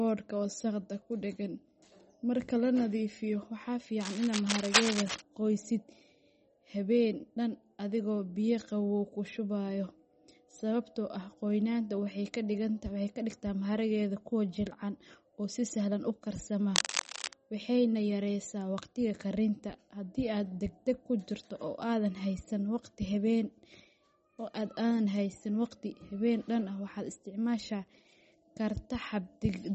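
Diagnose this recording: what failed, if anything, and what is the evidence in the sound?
Throughout the speech there is a plainly audible watery, swirling quality, with s sounds turning metallic and chirpy and consonant onsets smearing. At the codec stage, this is likely MP3 compression at a very low bitrate, consistent with roughly 33 kbps. Starved of bits, the encoder zeroes weak frequency lines, which then flicker on and off from frame to frame, and the damage lands on the sibilants and transients.

Dense, uneven scratching and rustling bursts, about as loud as the speech itself, sit over the sound from 4.00 to 5.21 s and again from 16.75 to 17.33 s, just after "si sahlan u karsama". In the analogue wiring, this is likely cable scratch noise: a worn cable, connector or control being moved, its contact resistance jumping rapidly and injecting bursts of noise for as long as the movement lasts.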